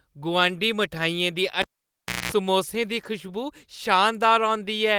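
Speech, with a cable pulled and plugged in between 1.62 and 2.32 s: a pop, then roughly 650 ms of near silence, including about 213 ms of 60 Hz mains buzz as only the plug tip makes contact, and a second pop when the signal reconnects. At 2.99 to 3.05 s there is a lost packet rebuilt from error correction. About 40 ms sounds rougher and noisier but has no gap, which points to two lost packets replaced by the low-bitrate redundant copies carried in the following packets.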